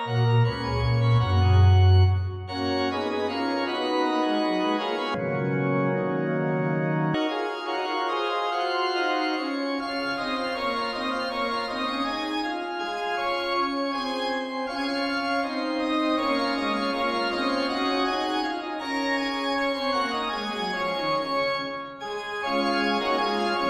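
From 5.14 s to 7.14 s the audio drops into a stereo read as mono fault. The interleaved left and right samples are being taken in sequence as one channel, so every frame yields two consecutive samples instead of a pair. Playback therefore runs at half speed and the pitch falls a full octave, 12 semitones down. The sound turns slow and heavy, with a fainter mirrored image of its content sitting in the upper half of the spectrum.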